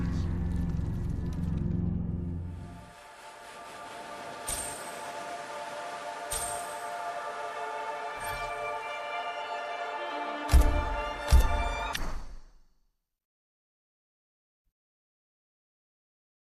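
Nothing stood out on listening to the audio.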